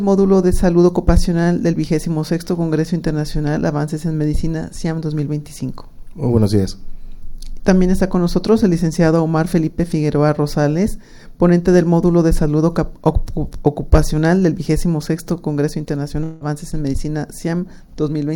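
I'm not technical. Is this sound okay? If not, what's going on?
No. At 16.23 to 16.43 s there is likely a long network dropout: audio stopped arriving, so the player stretched the last sound into a fading buzz, then resumed with that part missing.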